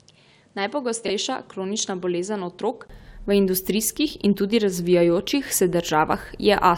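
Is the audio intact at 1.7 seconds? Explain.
No. From 0.0 to 2.90 s the sound is that of an input switched to a poorer device, likely a change to a different microphone or a headset's call profile. Through that stretch nothing is heard above 10.5 kHz, so the speech is duller and boxier, somewhat quieter, and sits over a faint background noise of its own. At 2.90 s a brief gap of about 20 ms marks the switch, and the fuller sound returns.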